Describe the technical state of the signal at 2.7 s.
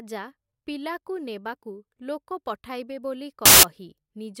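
At 2.7 s the speech signal is intact, with no dropout, distortion or other fault at that moment.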